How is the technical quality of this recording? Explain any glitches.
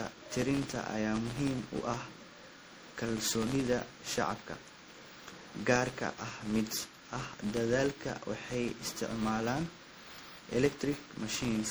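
The technical quality is poor. Two faults run through the whole speech recording.

From start to finish there is a filter restarted on every block. Each block begins from silence, adding a small transient that ticks at about 86 Hz, which fits a 512-sample buffer. The buzz rises and falls with the speech level. On a waveform, regular spikes appear at each block edge. A spectrogram shows faint vertical lines spaced evenly.

Also throughout, the speech sounds swirly, smeared and hollow, with blurred consonant attacks, most likely generation loss from repeated MP3 encoding, about five passes at a rate near 64 kbit/s. A spectrogram shows patchy holes and fizzy, unstable high-frequency bands. On a waveform, onsets look softened.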